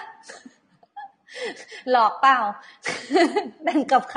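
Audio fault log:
Throughout: AAC compression. The speech sounds dull and smeared, with a watery, fizzy edge on sibilants and sustained vowels, and nothing is heard above 9.7 kHz. The likely cause is AAC-LC coding at a low bitrate, which fits roughly 32 kbps. Short of bits, the encoder cuts the top band off entirely and quantises the remaining frequency lines coarsely, so detail drops out and smears from frame to frame.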